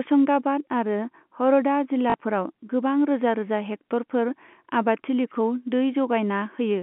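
At 2.1 s, just before "गोबां रोजा रोजा", there's a quick stutter that runs to 2.14 s. That's packet loss with the last packet repeated: about 40 ms went missing, which fits two 20 ms packets, and the receiver kept replaying the last good chunk until fresh audio showed up. The loops repeat at the packet rate, so the run buzzes briefly at around 50 Hz, a tiny robotic hiccup over the narrow telephone band.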